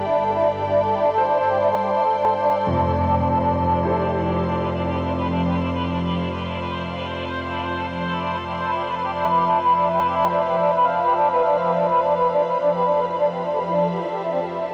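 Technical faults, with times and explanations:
1.75–2.5 s, chunks out of order: a brief jumbled stretch. A 250 ms chunk arrives two chunks late and plays after its successors, leaving three hard joins.
9.25–10.25 s, chunks out of order: a longer scrambled moment. A 250 ms chunk plays three chunks late, so the sound jumps ahead, then back, across three abrupt joins.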